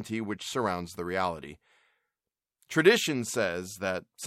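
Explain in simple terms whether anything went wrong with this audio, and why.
Nothing went wrong here; the speech comes through without any dropouts, glitches or other technical faults to point to.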